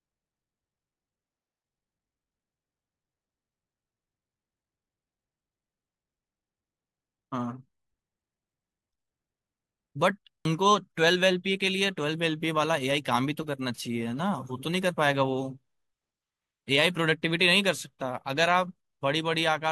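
At 10.45 s the speech lurches forward, and roughly a tenth of a second of sound simply never arrives. This is compressed frames skipped: about one whole frame of the encoded audio was missing or rejected by the decoder as damaged, so playback jumped ahead by that frame's length, 85.3 ms.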